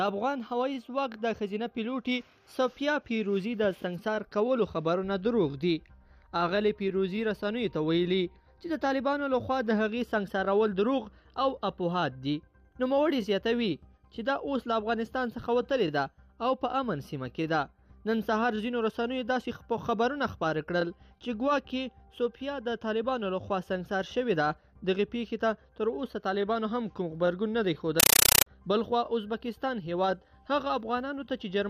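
A compressed stream played as audio: from 28.00 to 28.46 s an undecoded bitstream, consistent with 384 kbps AC-3, is passed as plain samples. The audio becomes loud, chattering static, 8 ms noise bursts and silent padding repeating at 31.25 Hz.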